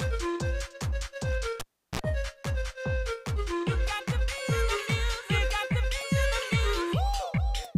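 At 1.60 s a sharp pop cuts the sound away, leaving near silence for about 350 ms. Then comes a short burst of 60 Hz hum, roughly 44 ms long, and a second pop as the audio returns at 2.00 s. This is the signature of a cable pulled and plugged in while live. The first pop is the contact breaking. The hum is mains interference picked up while only the plug tip touched the socket. The final pop is full contact being restored.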